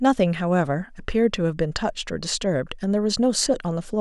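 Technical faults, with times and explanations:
No technical faults detected.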